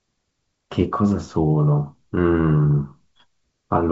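This speech clip has no technical fault. It carries the sound of G.722 wideband telephone coding at 64 kbit/s, with nothing above about 7.7 kHz and at most a faint trace of the codec in the upper band.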